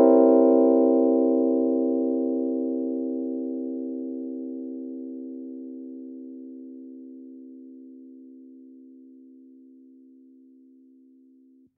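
No dropouts, distortion, timing or level faults can be heard anywhere in the audio.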